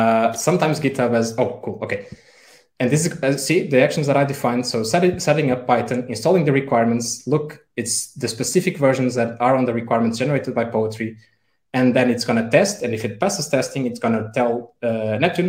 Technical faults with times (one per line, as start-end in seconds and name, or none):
14.70 dropped samples